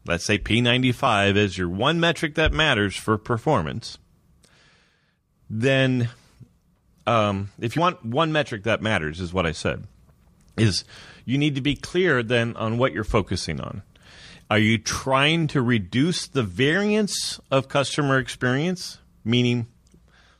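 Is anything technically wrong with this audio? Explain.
Yes. At 1.07 s and again at 7.77 s the speech lurches forward, losing a few tens of milliseconds. This is compressed frames skipped: a handful of whole frames never reached playback, either missing from the file or rejected by the decoder as damaged, so the audio jumps ahead.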